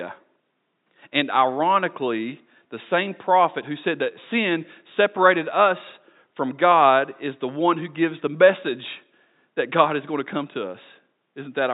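No technical faults are audible anywhere here.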